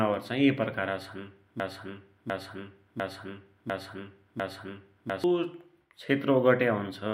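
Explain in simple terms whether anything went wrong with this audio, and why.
From about 1.6 s to 5.24 s, the speech gets stuck: the same short snippet, roughly 0.7 s long, plays again and again, five times in a row, like a scratched record. This is a broken-record loop. Whatever should have been heard during those seconds never arrives. The likely cause is that the player or the stream stalled and kept resending the last bit of audio it had stored until it recovered.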